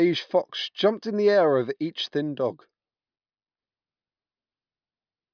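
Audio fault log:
No faults heard in this speech clip.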